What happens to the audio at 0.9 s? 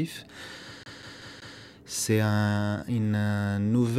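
At 0.9 s the audio is in a CD stuck on one turn, running from 0.83 to 1.59 s. The same 190 ms fragment plays four times, with a brief mute at each jump as the laser falls back one track, giving an even, rapid stutter.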